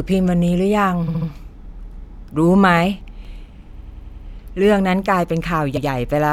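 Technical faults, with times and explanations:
1.07–1.28, 3.79–4.25 and 5.76–5.85 s, repeated frames: compressed blocks of about 70 ms and 93 ms were played again, so the speech stutters. About 0.21, 0.46 and 0.09 s are added.
2.54–3.49 s, CD scratch ticks: damage exceeded the disc's error correction once per revolution, leaving five very brief ticks, the longest about 1 ms, roughly five per second.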